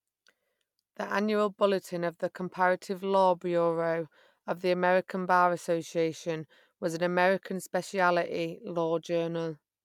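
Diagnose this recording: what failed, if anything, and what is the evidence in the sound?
Nothing in the recording points to a failure at any stage of the chain: the speech signal is continuous and intact, with no audible event that calls for a diagnosis.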